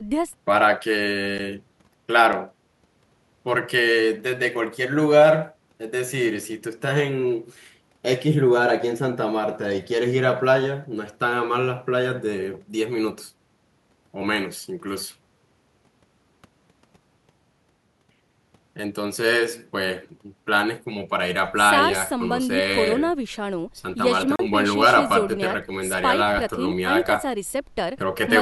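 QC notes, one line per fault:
1.38 s, block of digital silence: the output buffer went out empty for about 12 ms, which fits a 512-sample buffer not filled in time. The speech drops out and returns with no fade, so the hard edges make a sharp tick.
2.33 s, block of digital silence: a shorter empty block of about 6 ms, again with abrupt edges, heard as a small click.
24.36–24.39 s, block of digital silence: a 35 ms run of zeroed samples, long enough to hear as a brief hole in the speech.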